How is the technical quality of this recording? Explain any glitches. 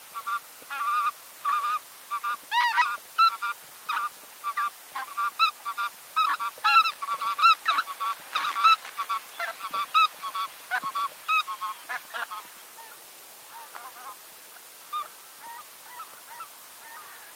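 The recording has two glitches, both from packet delivery and playback timing rather than the capture.

Skip ahead, 6.75 to 6.77 s: roughly 0.7 s of audio was discarded while later audio was already waiting, so playback leaps forward with no fill and the two sides are joined almost directly. The sound jumps abruptly, with a piece clearly missing.

Jitter buffer speed-up, 8.77 to 9.15 s: with too much audio queued, the receiver trimmed short pitch-period pieces repeatedly, removing about 40 ms in total. For that stretch the sound runs at 108% speed with unchanged pitch, giving a brief hurried feel.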